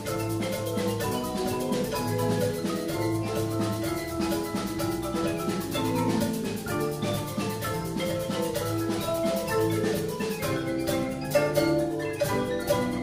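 Nothing stood out as a technical problem on listening to the clip.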